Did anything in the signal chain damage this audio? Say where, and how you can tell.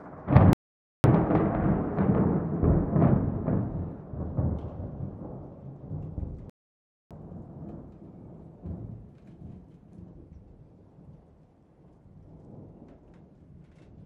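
Yes. At the playback stage the player went silent twice, from 0.53 to 1.04 s (about 0.51 s) and from 6.50 to 7.11 s (about 0.61 s). This is a playback stall, likely from a starved buffer or blocked thread. The sound cuts out mid-flow, then resumes.

After each gap, the player ran a catch-up at higher speed, resampling its backlog to regain lost time. From 1.04 to 4.04 s it plays at 1.1× speed, pitch up about one and a half semitones. From 7.11 to 10.11 s it runs at 1.15×, about two semitones sharp.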